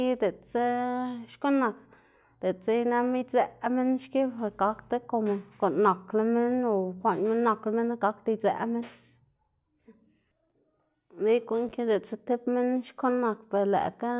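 Nothing here jumps out as a technical fault; the speech just runs along without any glitch or dropout worth flagging.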